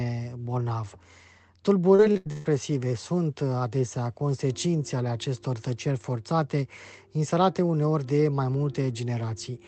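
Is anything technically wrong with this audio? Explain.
Yes. From 1.95 to 2.46 s there is repeated packet loss with a robotic sound. Four gaps, the longest 130 ms, are each patched by extending the last audio, so the stretch turns choppy and robotic. A spectrogram shows harmonics frozen into flat, smeared bands, and the waveform repeats near-identical cycles.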